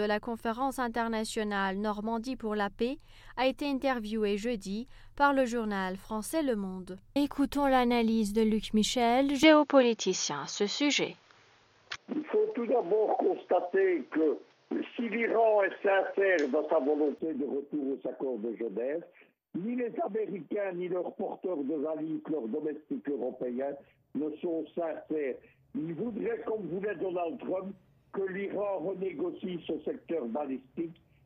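From 9.43 s to 17.19 s the sound turns dull and boxy, with nothing above 6.9 kHz, a small jump in level and a faint new background noise, with no gap at either switch. The likely cause is the input switched to a poorer device.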